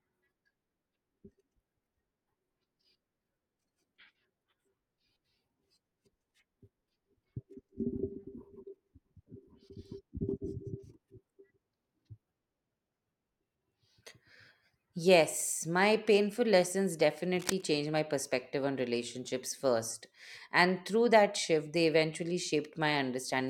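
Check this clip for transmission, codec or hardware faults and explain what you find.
One hardware fault is present. Cable scratch noise runs from 17.34 to 17.68 s, after "my painful lessons" and before "my perspective on relationships". It sounds like a rough rustling burst not far below the speech level. A worn, shifting connector is the likely cause.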